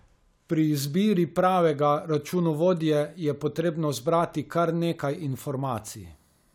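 No technical faults are audible.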